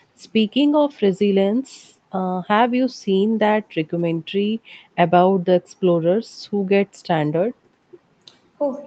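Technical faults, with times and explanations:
The speech has passed through ordinary call microphone processing and a WebRTC call path, with content reaching up to about 8 kHz and nothing above, which fits a wideband Opus setting at a modest bitrate around 32 kbps, and no technical faults can be heard.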